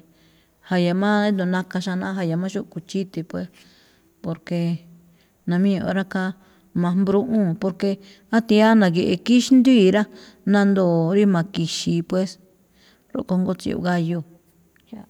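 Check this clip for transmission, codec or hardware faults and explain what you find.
Nothing stood out on listening to this speech recording that would point to a transmission, codec or hardware problem.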